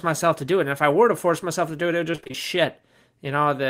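Choppy, robotic-sounding speech breaks up between 2.11 and 2.36 s, just after "do it it would", with the sound stuttering as pieces drop out. This is repeated packet loss: audio packets went missing or arrived late several times in quick succession, and each hole, none longer than 25 ms, was patched by stretching the preceding sound. About half of that quarter-second stretch is concealed material rather than real signal, which produces the mechanical texture.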